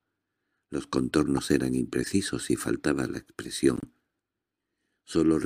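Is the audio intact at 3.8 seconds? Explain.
No. From 3.76 to 3.85 s, a corrupt frame decoded: a few damaged compressed frames play anyway, misplacing spectral energy and producing a brief chirp-like burst peaking near -20 dBFS.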